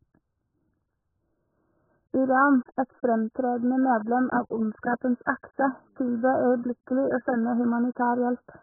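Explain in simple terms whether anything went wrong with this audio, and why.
Yes, something went wrong, and it lasts the whole clip. The speech sounds muffled and dull because nothing above about 1.7 kHz gets through, so the crisp top end of consonants is simply missing. There's also a smeared, warbly texture on held sounds. That pattern is most likely heavy AAC compression: the codec was squeezed so hard that it threw away the high frequencies and coarsely rounded off what it kept.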